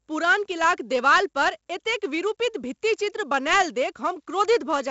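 Throughout, 4-bit ADPCM compression adds heavy, level-following gritty hiss to loud speech and roughens sharp attacks. Nothing reaches above 7.7 kHz, consistent with a 64 kbps stream.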